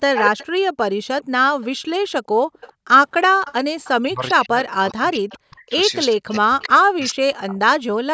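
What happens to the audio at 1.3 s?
A faint copy of the speech, delayed 408 ms, trails from 1.22 to 1.66 s: an echo leak, likely loudspeaker pickup the echo canceller missed.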